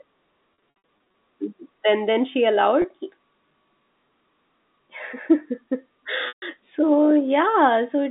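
Packet loss with pitch repetition at 0.54–1.14 s (280 ms lost, gaps up to 60 ms), 2.82 s (20 ms) and 6.28–6.42 s (140 ms). The receiver repeats the last pitch period, producing held, buzzy sound that fades toward silence in longer gaps, heard through the narrowband G.711 telephone coding.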